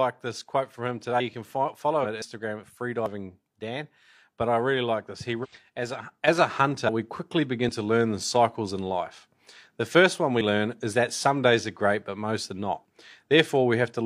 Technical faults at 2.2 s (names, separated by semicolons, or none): dropped buffer (overrun)